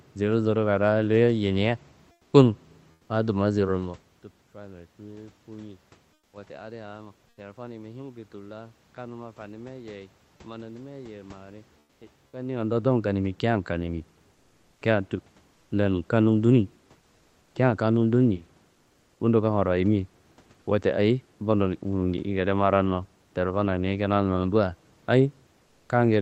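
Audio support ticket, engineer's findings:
Comfort noise in place of the background: in the pauses at 2.11–3.09 s, 6.13–6.33 s, 7.29–7.37 s, 11.79–12.01 s, 15.53–15.71 s, 18.73–19.19 s and 25.63–25.89 s, the room tone turns flat and featureless. It drops by about 1 to 7 dB, most at 6.13 s. Likely cause: Opus DTX halting transmission, with the receiver synthesising filler noise.

Onset clipped by the voice detector: at 6.31–6.33 s, sound resumes abruptly, with its first 20 ms missing and the soft attack gone. Comfort noise runs right up to the cut. Likely cause: the Opus DTX voice detector reopening the stream late.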